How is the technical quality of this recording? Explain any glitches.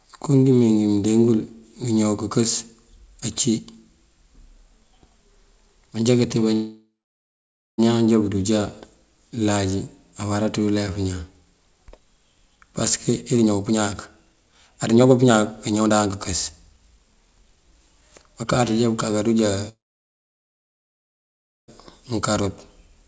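The recording has two call audio freezes and three jitter buffer speed-ups. The band stops at 8 kHz, which fits a wideband call codec.

Call audio freezes at 6.54–7.80 s and 19.69–21.70 s: the sound stretches into a fading buzz, then silence (about 0.9 s and 1.9 s). It then resumes where it stopped, with nothing lost. The likely cause is delayed packets emptying the jitter buffer.

Jitter buffer speed-ups at 12.50–13.79 s (128%), 14.21–16.07 s (136%) and 16.68–18.60 s (110%): the receiver trims pitch-period slices to shed backlog. The speech sounds hurried at the same pitch.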